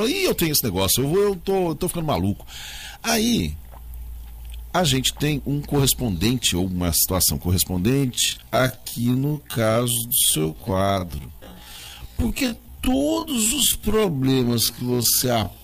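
From 7.88 s to the end at 15.6 s, the pace abruptly drops to about 0.56 times normal speed while the pitch stays where it was. This is a time-stretched section, likely from software lengthening the audio to fill a set duration by repeating short slices. The slowed passage drags. A plain slowdown, such as a wrong playback rate, would also pull the pitch down, but here it holds.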